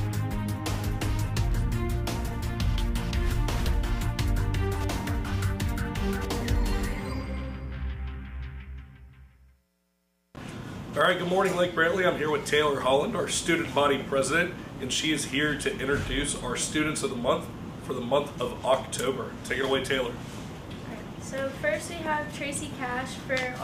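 No technical faults are audible.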